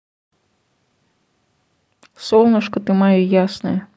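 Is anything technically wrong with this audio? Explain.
No, nothing technically wrong can be heard in this speech clip. No part of it points to a problem in how the audio was captured or delivered.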